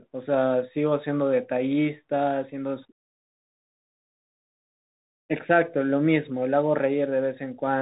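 Bluetooth CVSD headset codec damage runs through the whole clip, from start to finish. The speech has been squeezed through a narrowband headset link, and nothing above 3.8 kHz survives, so the voice sounds boxed and muffled. Each sample is coded as a single up-or-down step at 64 kHz, and the step size has to adapt as it goes. Fast, loud high content outruns those steps and distorts, s sounds come out scratchy, and a granular hiss sits under the speech.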